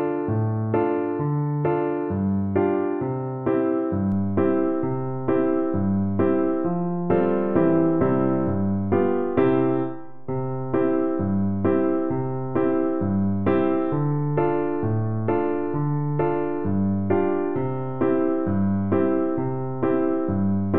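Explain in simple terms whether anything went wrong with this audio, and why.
A DC step happens at 4.12 s: the waveform's zero line suddenly shifts and stays shifted, giving a brief low thump while the sound carries on.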